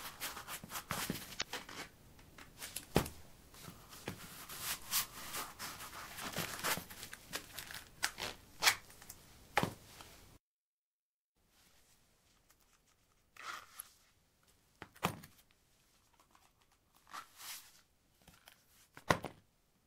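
At 1.38 to 1.42 s there is damaged data in a compressed stream. For about 40 ms, corrupted bytes leave the decoder unable to read the frames, so it loses sync and hunts for the next valid frame header, producing a brief broken disturbance in the sound.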